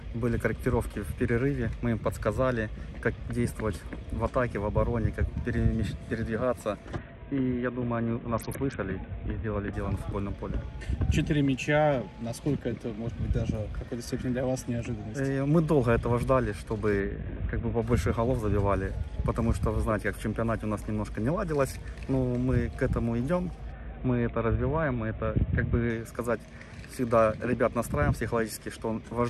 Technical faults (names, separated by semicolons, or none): Bluetooth SBC bit pool drop